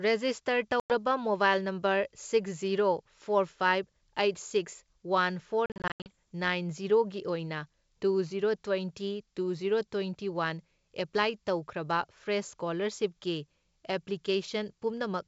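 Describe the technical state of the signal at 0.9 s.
At 0.9 s you're inside a packet loss on the ADPCM call, about 0.80 to 0.94 s: roughly five packets dropped to hard silence, then the mistracking decoder brings "ꯃꯣꯕꯥꯏꯜ ꯅꯝꯕꯔ" back with brief distortion.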